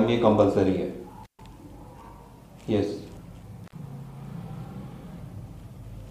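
A loose connection in the signal path opens twice, an intermittent contact fault: at 1.24 to 1.40 s the line is broken for about 127 ms, and at 3.64 to 3.73 s for about 65 ms. Each time the sound drops out abruptly, with crackle where the contact breaks and remakes.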